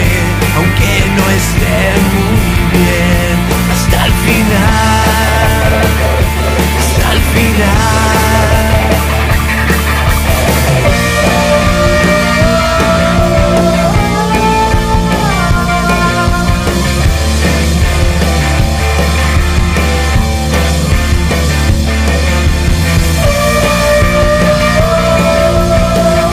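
Crackle and a brittle edge sit on the loudest peaks from start to finish, while quieter passages pass clean. This is hard clipping: the signal runs about 3 dB hotter than the stage carrying it can handle, so the tops of the biggest peaks are sheared flat. Only a small share of the waveform, around 3 percent, goes over, which is why the damage is heard as crackle on peaks rather than fuzz on everything.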